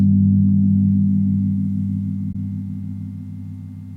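At 2.32 s a short glitch, lasting roughly 0.03 s until 2.35 s, cuts across the audio. This is a corrupt frame decoded: bits inside the compressed data were flipped, yet the decoder reconstructed the frame regardless, applying wrong gains or misread codes that put energy where none belongs. The result is a brief spurious chirp, blip or burst of noise peaking at around -20 dBFS. Its length points to a couple of adjacent damaged frames.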